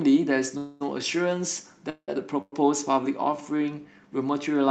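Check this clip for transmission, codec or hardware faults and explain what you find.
Four faults are audible: three call audio freezes and one jitter buffer slow-down, all in speech carried over a band-limited call codec whose top end stops around 8 kHz.

Call audio freezes occur at 0.57–0.83 s, 1.90–2.10 s and 2.42–2.54 s. Packets were likely held up in transit, draining the jitter buffer, so the receiver stretched the last sound into a fading buzz or hiss. The first freeze fills all 231 ms with that decaying sound. The second fades out and then sits silent for 80 ms of its 181 ms. The third fades out and then goes silent for 30 ms of its 104 ms. Each time, the speech resumes where it stopped, with nothing dropped. The pauses simply push the rest of the audio later, by a little over half a second in total.

A jitter buffer slow-down runs from 3.37 to 3.64 s. To rebuild its reserve, the receiver repeated individual pitch cycles or bits of pauses, adding 51 ms. 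Over that stretch the speech plays at about 84% speed without any change in pitch, so the sounds come out drawn-out.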